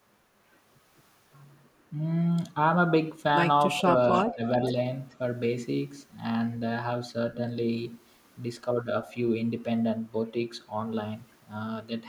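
From 4.15 to 4.32 s, a faint delayed copy of the speech appears, about 15 dB below the talker. This is an echo leak. It trails the original by 427 ms. The likely cause is a loudspeaker echo that the far end's canceller failed to remove.

From 4.27 to 4.43 s, the talker's speech dips by around 15 dB for roughly 150 ms. This is speech suppressed in double talk. The canceller likely mistook overlapping speech for echo and turned it down.

The echo leak returns from 4.61 to 4.68 s at the same 427 ms delay and about 15 dB down. A last trace, from 5.1 to 5.15 s, is barely audible at about 40 dB down.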